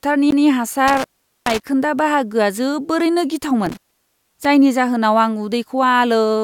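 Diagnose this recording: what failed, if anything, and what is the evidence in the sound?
The CD skip happens at playback, at 0.31 s: a tick and a brief mute of around 15 ms, after which the audio resumes from a different point. That jump in position, rather than a plain gap, points to the laser landing on another turn of the disc's spiral.

Intermittent contact is a fault in the analogue wiring, at 0.88–1.62 s, just before "बाहागोआ जोबोरैनो", and at 3.66–4.45 s, just after it. The line opens for 420 ms and 573 ms. There is crackle at the edges and faint hiss through each gap, which rules out a clean digital dropout.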